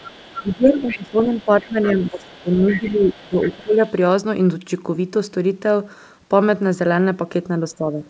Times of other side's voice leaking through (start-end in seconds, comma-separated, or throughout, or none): 0.00-0.56, 0.88-0.97, 1.27-3.92